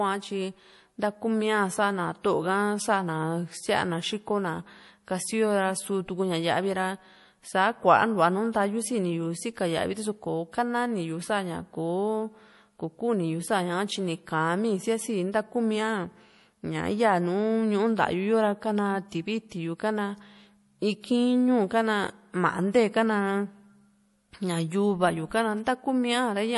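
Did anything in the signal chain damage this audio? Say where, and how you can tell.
Yes. The speech sounds watery throughout, with nothing above 11.5 kHz. That points to the codec stage, likely MP3 compression short of bits, zeroing weak frequency lines frame to frame.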